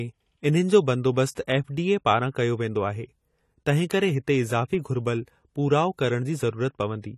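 Pre-echo appears at 1.35 s in this speech recording. A short hiss about 19 ms long runs just ahead of a sudden attack, which then lands softened and blurred. The transform coder spreads its quantisation noise evenly across each block. Because the attack falls late in its block, noise scaled to the loud onset also fills the quiet moment before it, where nothing masks it. AAC compression damage is plainly audible throughout. Nothing is present above 14 kHz, so the top end sounds dull and closed in. Detail is smeared, and sibilants take on a fizzy, warbling grain. The likely cause is AAC-LC encoding at a bitrate consistent with 32 kbps. At that rate the encoder lowers its cut-off and quantises the spectrum coarsely against its hearing model, leaving gaps or substitute noise in weaker bands.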